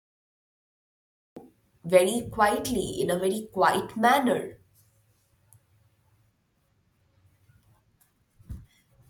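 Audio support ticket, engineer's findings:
Cut-off start: capture or stream began late, audio cut in at 1.37 s. Digital silence 0.00–1.37 s, then speech enters mid-sound with no natural attack or fade. Probable component: recorder/stream start trigger, armed after source already active.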